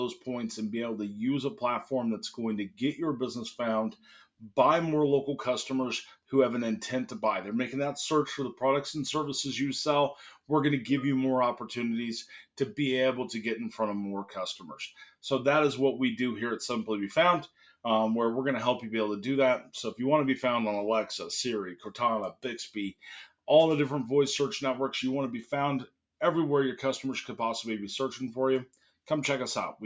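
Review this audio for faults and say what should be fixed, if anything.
No faults; nothing needs fixing.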